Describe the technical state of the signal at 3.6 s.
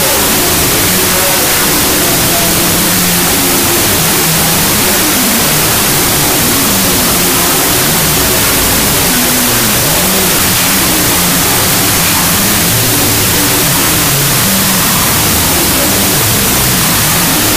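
At 3.6 s the signal shows a wrong sample width fault, present across the whole clip rather than starting there. The data appear to have been written with four bytes per sample and read back two at a time, which fits 32-bit float data interpreted as 16-bit integers. Each true sample splits into two mismatched values, so the audio plays at half speed, an octave low, with the original buried under loud, harsh noise.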